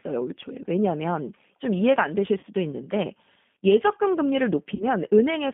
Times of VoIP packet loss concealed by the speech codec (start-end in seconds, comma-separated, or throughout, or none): 2.39-2.46, 4.75-4.86